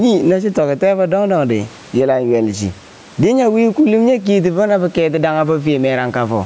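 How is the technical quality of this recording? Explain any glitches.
The main problem is gain pumping, heard from start to finish. The level swings by about 15 dB. The likely cause is input gain set far too high, with a fast limiter or compressor pulling it back down on each loud syllable. Loud and quiet passages end up squeezed together, so the speech sounds flattened. The room noise sits about 37 dB below the speech.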